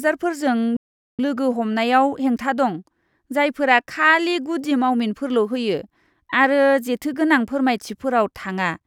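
At 0.77 s the speech cuts out mid-flow and stays silent until 1.19 s, a gap of about 420 ms, before carrying on. This is a playback stall: the player most likely ran short of data or had its thread held up, so nothing reached the output until it caught up. On a waveform it shows as an abrupt flat line. A spectrogram shows a clean vertical band of empty space with energy resuming sharply on the far side.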